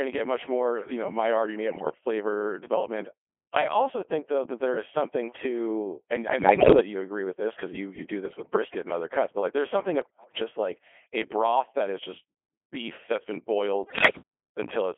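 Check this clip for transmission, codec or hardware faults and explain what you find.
Two faults appear: the whole recording has passed through a very low-rate vocoder, and five short stretches carry bit-error damage on top of that.

The Codec 2 vocoder is present from start to finish, at 2.4 kbit/s within a 300 Hz to 3.4 kHz line band. Only pitch, voicing, energy and a coarse spectral envelope survive, and the decoder rebuilds the speech from sine waves, so the original waveform is gone. The result is heavily robotic and buzzy. On a spectrogram the harmonics look unnaturally clean and evenly combed, with nothing below 300 Hz or above 3.4 kHz. The waveform looks synthetic rather than natural.

Bit errors on digital voice radio strike at 1.68 to 2.02 s, 6.40 to 6.80 s, 8.26 to 8.56 s, 10.02 to 10.40 s and 13.84 to 14.22 s. Each burst lasts roughly a third of a second, with several percent of bits corrupted. 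That points to about a dozen or more vocoder frames being decoded wrongly in each burst. Because each bit steers a frame's pitch, level, voicing or envelope, the voice jumps and breaks into warbling bleeps and gibberish. On a spectrogram these show as sudden harmonic jumps and smeared or shifted formant bands. The waveform shows abrupt envelope steps.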